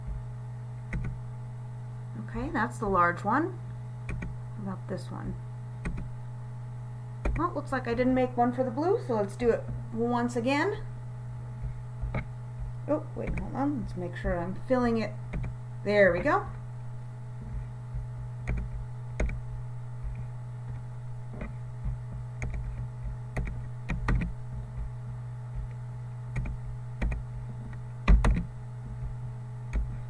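Nothing stood out on listening; no technical faults could be heard anywhere in the recording.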